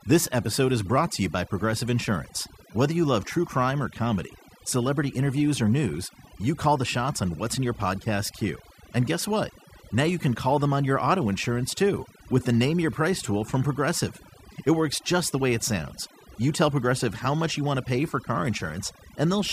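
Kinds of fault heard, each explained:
Mains hum: Power-line energy is leaking into the signal, from a ground loop or a transformer close to the wiring. Here it is a steady 60 Hz tone that runs the whole length of the speech, sitting roughly 30 dB below it. It is easiest to hear in the pauses. A spectrogram shows a thin, unbroken horizontal line at 60 Hz. In the gaps, the waveform shows a small, regular ripple repeating about every 16.7 ms.
Overdone noise removal: A noise reduction process was applied far too aggressively. Any frequency band that comes close to its noise estimate is pulled down hard or switched off entirely, so the softer parts of the speech are removed along with the noise. Throughout this clip, the background drops and breaks up into twinkling specks. A spectrogram shows dark, gouged-out regions between words and scattered isolated points of energy. The speech bands look patchy and full of holes.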